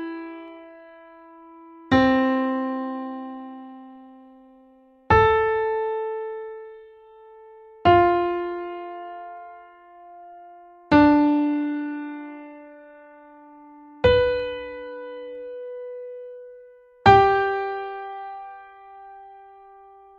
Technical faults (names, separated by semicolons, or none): dropped samples